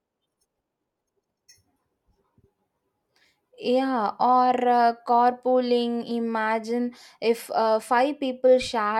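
Processing that likely compressed the opening of this speech clip to fit a shorter slot, running it at double speed while holding pitch by discarding short slices of the signal, produced a time-stretched section from 0.0 to 1.5 s. Because the pitch stays put while the pace doubles, that stretch sounds rushed, and the delivery shifts abruptly to a slower rate once the section ends at 1.5 s.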